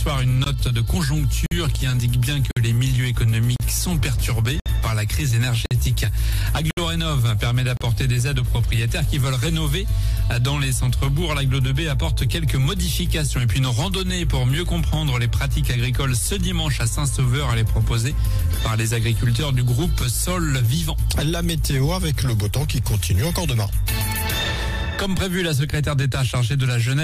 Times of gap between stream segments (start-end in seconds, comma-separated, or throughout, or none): 0.44-0.46, 1.46-1.51, 2.51-2.57, 3.56-3.60, 4.60-4.66, 5.66-5.71, 6.71-6.77, 7.77-7.81